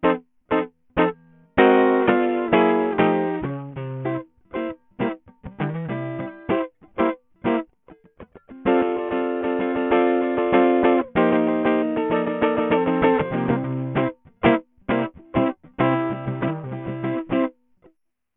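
The music was most likely squeezed through Bluetooth SBC compression at a very small bit pool, with damage heavy enough to fit a link running near 48 kbps. SBC splits the signal into a few wide frequency bands and hands out bits without weighing what the ear notices, so the faint upper bands are starved. Throughout, the treble thins out and flickers, while a gritty, grainy noise and aliased hash cling to the music.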